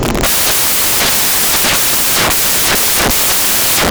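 Samples built from the wrong bytes, present across the whole speech clip, turn it into loud, harsh broadband noise from start to finish. Each sample's bytes are being assembled incorrectly, whether shifted by one byte, taken in the wrong order or read with the wrong alignment, so the rapidly fluctuating low-order bits land in the most significant position.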